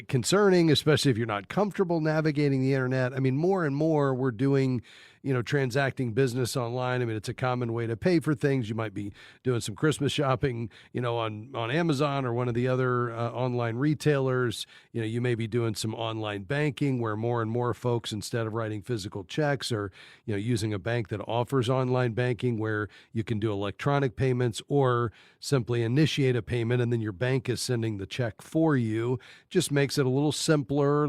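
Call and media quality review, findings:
Nothing to flag on the speech track here; no faults turned up on review, so this one can be closed out.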